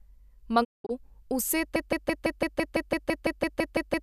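Between 0.63 and 0.91 s the speech falls away in a digital broadcast dropout. The sound fades out over about 20 ms and then leaves several short holes scattered across roughly 240 ms. Together they remove about 216 ms of audio, and the longest single gap runs 192 ms, which fits around nine lost frames. The receiver muted while frames failed, so the missing material never returns. That sets it apart from a packet-loss glitch that fills gaps with smeared or repeated sound.

From 1.76 s to the end, a broken-record loop takes over. A 168 ms fragment repeats exactly, back to back, 14 times, and the speech never moves forward again. The cause is likely a stalled player or stream that kept re-sending the last piece it held. A stutter or jitter artefact would advance through the material in uneven steps, but here the identical slice cycles at a steady rate.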